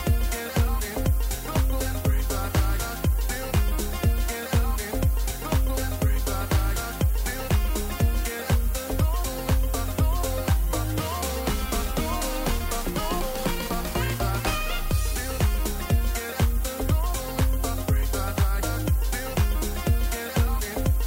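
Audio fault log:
Throughout: low bit depth with noise shaping. The sound sits on a steady, thin hiss that climbs sharply toward the top of the band, roughly 15 dB below the signal. It's quantised to 6 bits, and the rounding error has been pushed up into the highs.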